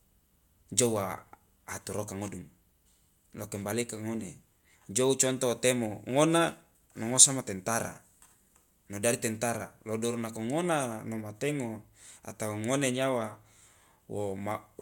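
A speech recording with no technical fault to report. Nothing in it calls for a time, a value or a cause.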